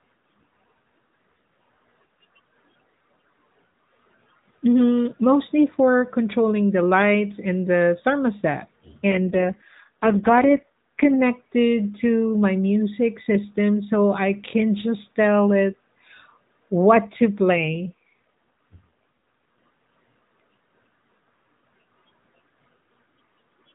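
From 9.1 to 11.2 s and again from 17.56 to 19.56 s, an AMR rate drop turns the speech rougher and buzzier, which fits a fall from 12.2 to 4.75 kbps. The spectrogram keeps its 4 kHz ceiling and shows no gap, but harmonics smear.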